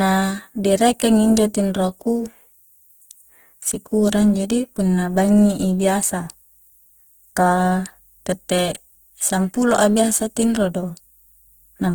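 From start to end the speech carries plainly audible Opus compression, likely at a low bitrate around 16 kbps. Tones sound grainy, rough and noisy rather than swirling. A spectrogram shows energy reaching about 20.1 kHz, with smeared, noise-filled bands instead of clean harmonics.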